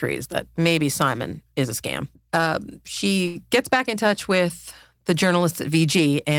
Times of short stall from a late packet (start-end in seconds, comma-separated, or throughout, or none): 3.27-3.37